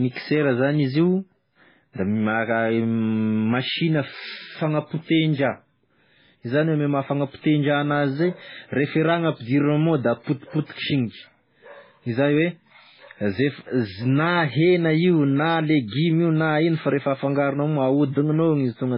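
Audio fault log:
Throughout, MP3 compression: the speech has nothing above 5.3 kHz, giving a dull, band-limited sound, and heavy artefacts are present across the whole clip. The likely cause is an MP3 encode at a very low bitrate, consistent with about 16 kbps. With so few bits, the encoder cuts the treble at a fixed point and discards weak frequency components that flicker between frames. The result is a watery, swirling texture, metallic chirps on s sounds, and smeared consonant attacks.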